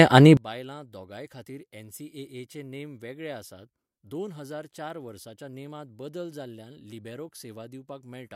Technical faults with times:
0.37-8.36 one channel inverted

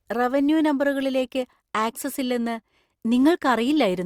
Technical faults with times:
none

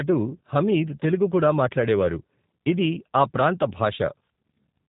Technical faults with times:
0.00-4.89 G.729 codec

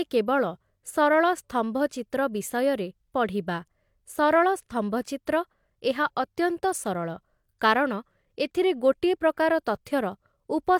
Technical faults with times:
none

